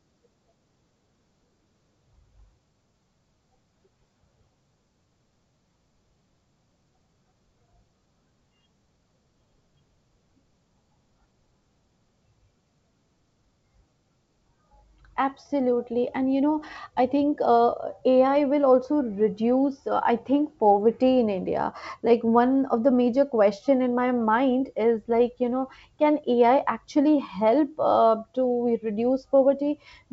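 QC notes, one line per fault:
Nothing stood out on listening to this speech clip over its G.722 wideband telephone path.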